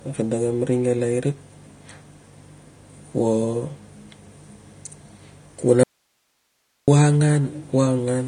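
From the start, the speech sounds dull and smeared, with nothing above 9.6 kHz. This is likely AAC compression, consistent with AAC-LC at around 32 kbps.

At 5.84 s, the speech cuts out abruptly. Only faint hiss, far below the speech, remains until 6.88 s. This is an audio dropout to a faint residue, likely from the signal being lost while the path stayed live.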